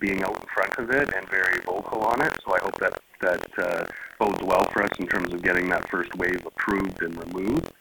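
From start to finish the audio carries buffer tearing: a steady robotic rattle at about 43 Hz that rides on the signal and drops away in gaps. The writer and the reader of the output ring buffer have drifted into each other, so every period splices in roughly a tenth of material from around 100 ms earlier. The 43.1 Hz rate fits a 1024-sample buffer. On a waveform, hard discontinuities repeat every 23 ms. A spectrogram shows vertical striping at that spacing wherever sound is present.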